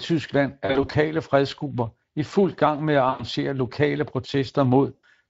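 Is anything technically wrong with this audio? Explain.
Yes. The speech has two problems: codec damage throughout, and three short stretches of concealed packet loss.

The Speex codec affects the whole clip, with plainly audible damage, and the sound points to a bitrate around 20 kbps. Speex is a CELP coder: it models the voice with a filter driven by a coded excitation signal, and when the excitation gets too few bits, speech turns noisy and hoarse. On a spectrogram the harmonics look blurred and grainy rather than cleanly striped, and any content above 8 kHz appears only as shaped noise.

VoIP packet loss concealed by the speech codec occurs at three points. From 0.65 to 0.92 s, just before "fredsgrupper i fuld gang", about 120 ms of audio is missing in scattered gaps across roughly 240 ms, none longer than 40 ms. From 3.09 to 3.24 s, right after "fuld gang med at", about 100 ms is lost. 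From 4.95 to 5.04 s, about 80 ms is lost. In each case the decoder fills the gap by extrapolating from its last pitch and filter and lowering the gain as it goes. The result is a stretched, buzzy tone or a coloured noise that fades, and the voice stays weak or distorted briefly after audio resumes. A spectrogram shows frozen, smeared harmonics or a fading noise band there, and a waveform shows a tapering envelope rather than a clean gap.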